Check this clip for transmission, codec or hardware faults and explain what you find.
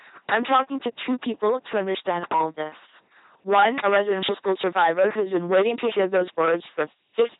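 Two faults run through the whole speech clip: hard clipping and LPC-10 vocoder coding.

The hard clipping lasts from start to finish. The signal reaches a stage about 13 dB hotter than it can pass. Every peak is sliced flat, and roughly one sample in fourteen sits on the ceiling. Those squared-off tops create harmonics far above the speech. The result is a harsh fuzz laid over each loud syllable, not just an occasional crackle.

The LPC-10 vocoder also covers the entire clip. The coding is heavy. The voice is rebuilt from a short all-pole filter, fed by either a buzz or a hiss. Each moment is forced to be fully voiced or fully unvoiced. The speech sounds mechanical and robotic, with stray buzz or hiss where that choice misfires. Nothing remains above 3.8 kHz, which fits the 2.4 kbit/s military LPC-10 vocoder.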